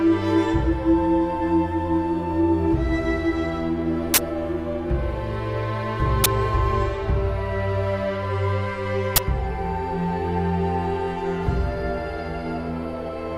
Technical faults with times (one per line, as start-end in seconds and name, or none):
4.14-4.18 uninitialised buffer
6.24 uninitialised buffer
9.16 uninitialised buffer